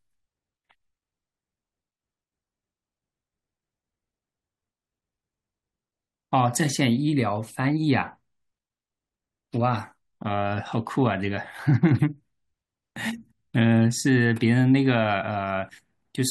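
Speech recording with nothing technically wrong audible anywhere.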